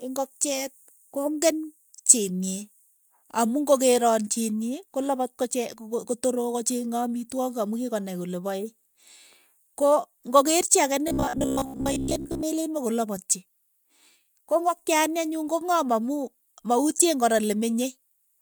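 At 11.08 s the speech goes robotic, and it stays that way until 12.44 s. What you hear is a stiff, metallic buzz pinned at about 66.8 Hz that still loosely follows the talking. That's the classic robotic sound from repeated short buffers. The likely cause is new audio arriving too late, so playback keeps looping the last roughly 15 ms chunk for most of that stretch and drops the real material in between.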